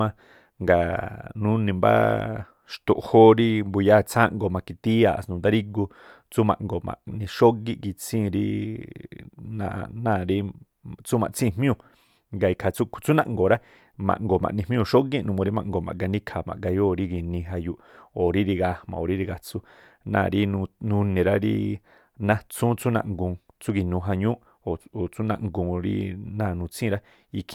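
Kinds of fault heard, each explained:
No technical faults can be heard in this speech.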